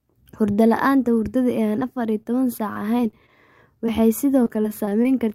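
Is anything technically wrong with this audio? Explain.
Yes. The speech is interrupted by two kinds of network dropout.

Short concealed packet loss occurs at 1.79–1.83 s, 2.23–2.27 s and 3.86–4.01 s. Around 20 ms of audio failed to arrive each time, so the decoder extended the preceding sound and crossfaded back. Each gap is heard as a brief smear or wobble, and the last one also stretches the timing by roughly 10 ms.

Repeated packet loss with a robotic sound runs over 2.73–3.30 s and 4.44–5.07 s. Four and then five gaps, none longer than 24 ms, were each patched by continuing the last sound, covering about an eighth of each stretch. The result is choppy speech with fragments missing.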